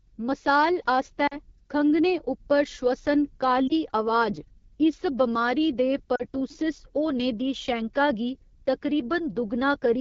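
Throughout, the speech sounds rough and raspy, with a hazy, noise-like top end. This is the AMR wideband (HD Voice) codec working at one of its lowest rates, which fits 8.85 kbit/s. The pulse-driven vocal tract model cannot follow the voice closely, and shaped noise fills the band above 6.4 kHz.

From 1.27 to 1.37 s the sound briefly warbles and dips, then returns weak and rough. A shorter dip follows at 3.68 to 3.72 s, and another at 6.16 to 6.23 s, just after "इस बमारी दे". These are lost AMR speech frames. The gaps of about 40 ms, 20 ms and 40 ms fit two, one and two corrupted 20 ms frames. Each time the decoder repeated its last good settings at falling gain.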